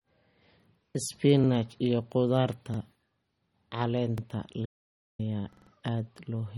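The whole speech track has likely been through a heavily squeezed MP3 encode. Short of bits, the encoder has dropped the treble, with nothing above 17.4 kHz, and switches weaker frequency lines on and off from frame to frame. The damage is plainly audible throughout: a watery, swirling texture, metallic chirps on s sounds, and smeared attacks, all consistent with a bitrate around 32 kbps.

At 1.44 s, 2.74 s and 4.18 s the playback device ran out of fresh audio and played its last buffer a second time. Each repeated buffer is a 46 ms slice heard twice, which fits a 2048-sample buffer. The hard joins turn each one into a quick stutter in the flow of speech, and no audio is lost at these points.

From 4.66 s to 5.19 s comes an audio dropout to silence. The input was likely cut off, through a lost connection or a mute, while the recorder kept writing silence. The speech stops abruptly and is replaced by about half a second of dead silence with no room tone. 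Whatever was said in that stretch is gone, and the speech resumes just as suddenly.

The worst repeated buffer runs from 5.53 s to 5.71 s. There the same 46 ms buffer plays four extra times, so one tiny slice sounds five times in a row. It comes across as a machine-gun stutter lasting close to a fifth of a second.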